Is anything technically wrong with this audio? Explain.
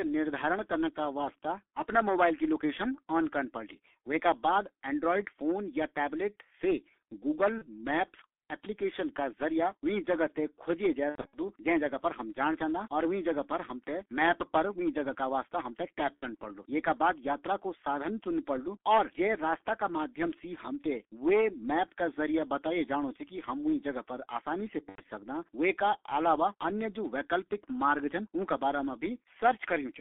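Yes. The whole clip carries heavy G.723.1 codec damage. The speech is confined to roughly 250 Hz–3.5 kHz, which fits a 6.3 kbit/s stream, so it sounds muffled and hoarse with smeared consonants.

VoIP packet loss concealed by the speech codec occurs at 7.58–7.66 s, 11.10–11.37 s, 16.21–16.26 s and 24.89–25.02 s. The decoder guesses missing frames, producing buzzy, fading sound with weak recovery afterwards.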